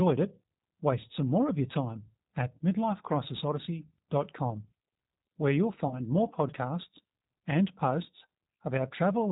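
The clip is speech carried through the G.729 codec at 8 kbit/s, and the coding damage is plainly audible throughout. The codec models the voice as a vocal tract filter driven by a pitch predictor and a few pulses per frame. The result sounds rough and slightly synthetic. Nothing above 4 kHz survives, so sibilants and breath are dull. The sound points to the G.729A variant. There is also a VoIP packet loss concealed by the speech codec, from 5.88 to 6.00 s. About 30 ms of audio went missing, which fits one lost packet. The decoder filled the gap by repeating its last pitch and filter settings at falling gain. That turns the sound into a brief, fading smear. The predictor then needs time to recover, so the voice stays weak or distorted for tens of milliseconds or more after the gap.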